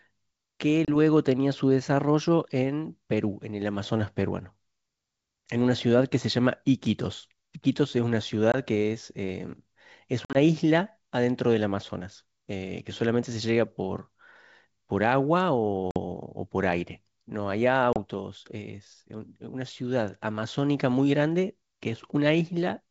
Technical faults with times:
0.85-0.96 packet loss on an ADPCM call
8.52-8.56 packet loss on an ADPCM call
10.25-10.36 packet loss on an ADPCM call
15.91-15.99 packet loss on an ADPCM call
17.93-17.99 packet loss on an ADPCM call

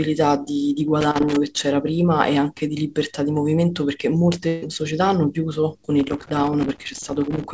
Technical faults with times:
1.01-1.36 loose connector crackle
4.48-4.64 burst of packet loss
5.99-7.44 loose connector crackle

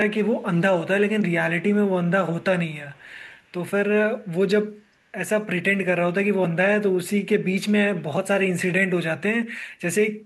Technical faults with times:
0.38-0.43 echo leak
2.91-3.52 echo leak

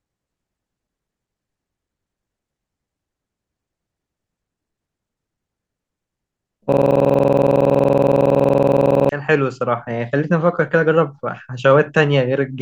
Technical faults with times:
6.72-9.09 system hang loop

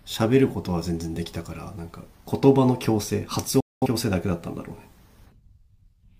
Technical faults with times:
3.60-3.86 digital broadcast dropout

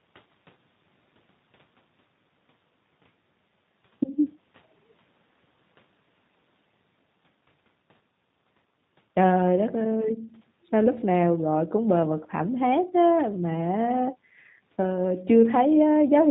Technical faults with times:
0.00-16.30 G.729 codec

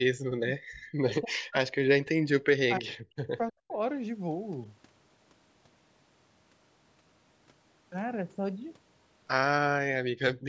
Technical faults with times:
0.00-0.66 speech suppressed in double talk
1.04-3.73 speech suppressed in double talk
10.09-10.47 speech suppressed in double talk

